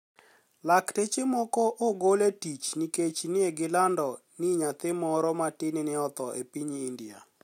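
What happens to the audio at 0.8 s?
Nothing goes wrong at 0.8 s; the speech there is intact, with no dropout, click, distortion or other fault.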